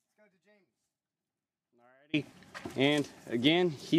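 The audio opens already in a dropout to a faint residue. From the start until 2.13 s, the wanted signal is missing. Only a faint leak of it remains, roughly 35 dB below its normal level. At 2.13 s the full signal returns abruptly, not as a fade. The path after the break stayed live, so the gap holds that weak residue rather than silence. The likely cause is a lost connection or muted feed upstream.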